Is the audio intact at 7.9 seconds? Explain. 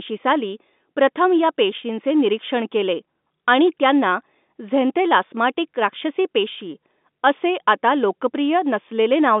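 Yes, the speech is intact at 7.9 seconds, with no fault at that moment.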